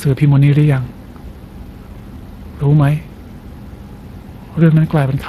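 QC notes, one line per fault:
Throughout, Speex codec: the speech carries a plainly audible hoarse, noisy grain from the CELP model's coarse excitation coding, which fits a mid-level Speex setting near 22 kbps. Content stops at about 15.2 kHz, with nothing above.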